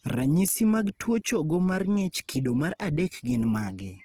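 Speech with plainly audible Opus compression throughout: the sound turns rough and grainy, likely from CELT mode at a rate that fits 16 kbps. A spectrogram shows noise-filled, hole-free bands ending near 20.2 kHz.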